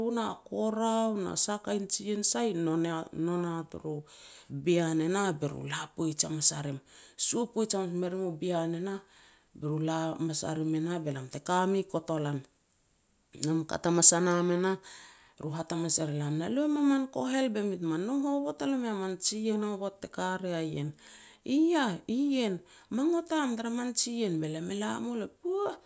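Nothing stood out as a technical problem on listening to this speech recording.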